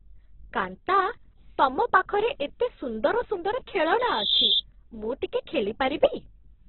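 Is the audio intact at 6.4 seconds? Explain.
No. At 6.4 seconds, as throughout the clip, the speech carries heavy damage from what is likely Opus compression at a rate near 8 kbps. Starved of bits, the encoder fills bands with folded or noisy content, so the sound is rough and grainy, and a spectrogram shows nothing above 4.3 kHz.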